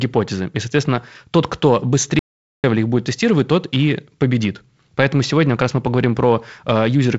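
Speech, carried through G.722 wideband coding with nothing above about 7.7 kHz, has an audio dropout to silence from 2.19 to 2.64 s. The sound stops right after "соответственно тот кто" and resumes at "их будет тестировать тот". The gap lasts about 0.45 s. It is silent, with no room tone underneath. Whatever was said there is lost. The likely cause is a brief loss of input, such as a link failure or momentary mute, while recording continued.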